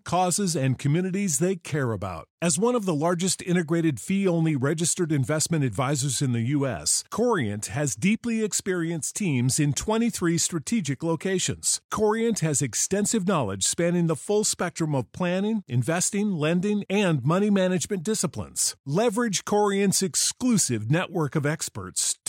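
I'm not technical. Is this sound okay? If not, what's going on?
Yes, it sounds fine.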